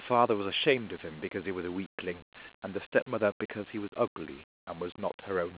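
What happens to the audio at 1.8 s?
At 1.8 s the speech carries on intact, with no dropout, click or other disturbance.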